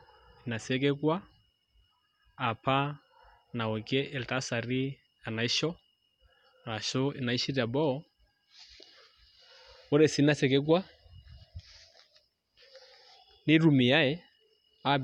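Speech recording, with no technical faults audible.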